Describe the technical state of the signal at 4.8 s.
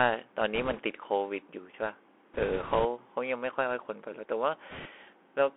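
At 4.8 s the speech sits inside a short burst of bit errors on a Bluetooth voice link, running from 4.71 to 4.87 s. Flipped bits in the one-bit delta stream each nudge the waveform slightly the wrong way, and the adaptive decoder soon recovers. The result is no sharp clicks but a rushing, crackly noise laid over the speech, consistent with an error rate of a few percent. On a spectrogram this shows as a brief band of diffuse broadband grain filling the speech band for about 0.16 s. The waveform looks roughened rather than spiked.

Underneath, the whole clip carries the Bluetooth CVSD headset codec, audibly so. Its 1-bit up/down coding, which fits a 64 kbps link, confines the sound to roughly 300 Hz to 3.4 kHz. A spectrogram shows a hard ceiling near 3.4 kHz, empty above it. Fast high-frequency content outruns the adapting step size, so sibilants turn scratchy and a granular hiss sits beneath the speech, visible as a fine noise floor between formants.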